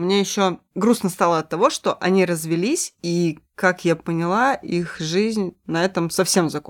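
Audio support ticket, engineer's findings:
No audible faults found in the speech recording; the signal path checks out on listening and no component needs attention.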